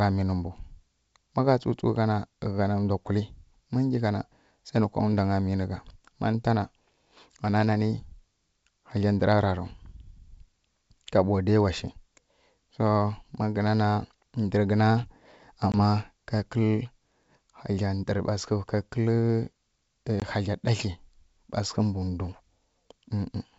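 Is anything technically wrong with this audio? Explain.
Yes, there are two brief dropouts from packet loss on an ADPCM call, at 15.72–15.75 s and at 20.20–20.26 s, the second just before "hagla ɗatli ɓa". Each time about 20 ms of signal, roughly one packet, went missing and was filled with silence, so the receiving decoder's adaptive predictor and step size drifted away from the sender's. The result is a sharp-edged gap, then speech resuming slightly distorted before it settles. The G.722 wideband coding underneath shows faint or no damage of its own.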